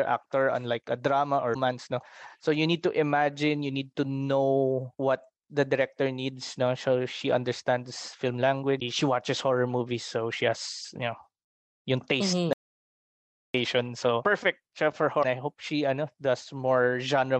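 Three short glitches land at about 1.50 s, 8.77 s and 15.19 s, each around 55 ms, which is damaged data in a compressed stream: the decoder hits corrupted frames, loses sync and skips ahead to the next header. Then at 12.53 s the audio drops out to dead silence for roughly a second, to 13.54 s, with no room tone at all, most likely the input being lost while the recorder kept writing silence.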